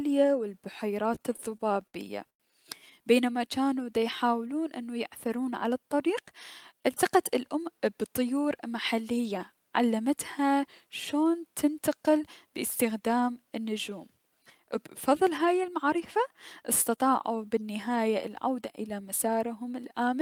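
Speech that catches and hitches from 1.15 to 2.42 s, where ten short stalls hold the last sound in place, the longest about 100 ms, together filling 257 ms, or roughly a fifth of that stretch. This is a repeated stall (stutter): packets arrived late or too slowly, the jitter buffer kept running dry, and the receiver stretched the previous sound until fresh audio arrived, so almost nothing is lost but the delivery drags. From 3.64 to 4.04 s the speech turns briefly drawn-out at an unchanged pitch, running at 86% speed and gaining 62 ms. That is a jitter buffer slow-down: with its reserve low, the receiver repeated single pitch periods or slivers of pauses many times over to rebuild the buffer, which lengthens the sound without lowering it. Between 6.08 and 7.73 s the opposite happens. The speech sounds slightly hurried, running at 107% speed with pitch intact, and around 150 ms is trimmed away in small pieces. 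This is a jitter buffer speed-up: the buffer held more audio than its target, the kind of surplus left when delayed packets arrive in a bunch, so the receiver repeatedly cut out short spans of one or a few pitch periods to bring the delay back down.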